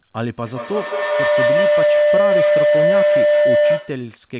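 From 0.46 s to 4.12 s a feedback howl builds. A loudspeaker feeds the microphone on the same call and gains level on each loop, until a tone near 500 Hz, repeating roughly every 150 ms, peaks about 9 dB over the speech. Unlike echo, the repeats grow instead of fading.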